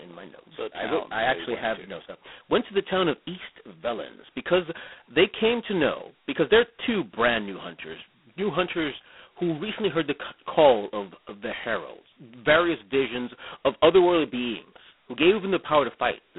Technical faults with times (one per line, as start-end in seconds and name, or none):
0.00-16.38 G.726 ADPCM